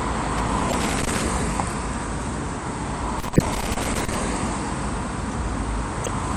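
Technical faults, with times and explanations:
Throughout: MP3 compression. The sound has a watery, swirling texture with a dulled top end, likely from MP3 encoding at a low bitrate, around 64 kbps. With too few bits, the encoder cuts the treble at a fixed frequency and drops weak frequency lines, which flicker in and out between frames. Transients also smear. On a spectrogram, energy stops at a hard horizontal ceiling, and the area below it is broken into patchy, blocky holes that come and go.
0.38–1.26 s and 3.20–4.15 s: loose connector crackle. In each stretch an irregular burst of scratchy crackle sits over the sound, lasting just under a second. A contact that keeps making and breaking chops the signal on and off, and any DC on the line turns each break into a pop. In the waveform, these stretches show jagged dropouts and sharp spikes at uneven intervals. A spectrogram shows scattered vertical streaks of broadband energy throughout each burst.
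0.70–0.74 s, 3.33–3.41 s and 6.03–6.08 s: damaged data in a compressed stream. Each one is a brief chirp, squawk, click or short hole. The first two fall inside the crackle bursts. At these points the compressed data is corrupt, so the decoder misreads the frames, loses sync and searches ahead for the next valid frame header. A spectrogram shows a short block of garbled, tonal or smeared energy with an abrupt edge. The waveform shows a discontinuity at each point.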